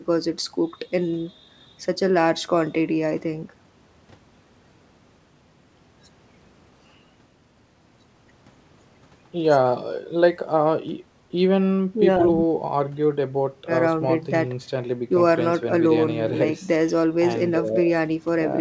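No technical faults are audible.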